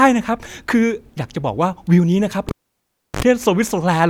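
At 2.49 s the speech breaks with a pop as a live cable is pulled and plugged in. Near silence follows for about 0.69 s. Then comes a 61 ms burst of 50 Hz mains buzz as the plug tip touches first. A second pop restores sound at 3.23 s.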